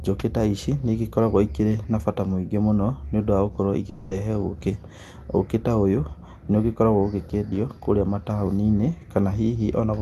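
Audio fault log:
3.89–4.13 s, long network dropout: packets likely stopped arriving for 220 ms, so the receiver extended the last sound as a fading buzz, and that stretch is lost.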